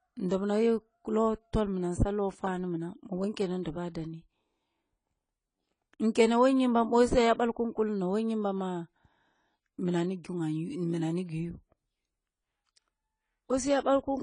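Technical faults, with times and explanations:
Throughout, AAC compression: nothing is heard above 10 kHz, and the speech sounds dull and smeared, with a warbling, fizzy edge on sibilants, which fits AAC-LC at about 24 kbps. That texture within the remaining band, likely from coarse codec quantisation, sets it apart from a plain low-pass filter.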